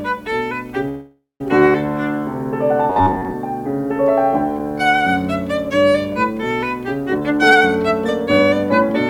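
At 0.88 s the music hits a call audio freeze lasting until 1.41 s: the last sound is stretched into a fading buzz that drops to silence for its final 0.16 s or so, then picks up exactly where it left off, likely because packets stalled and the jitter buffer ran dry.

From 2.90 to 3.35 s you get robotic sound from repeated short buffers. It's a stiff, metallic drone pinned at 93.8 Hz, which fits a block of about 10.7 ms being looped. Roughly half of that stretch is repeats, likely because fresh audio arrived too rarely.

Then from 7.06 to 8.90 s there's a jitter buffer speed-up. The receiver trims short pitch-period slices to drain excess buffered audio, running the music at 114% speed with the pitch unchanged. Around 0.3 s gets cut, so the tempo noticeably rushes and wobbles.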